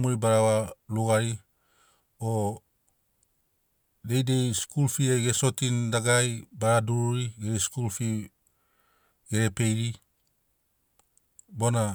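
No technical faults can be heard in this speech recording, so there are none to describe in time order.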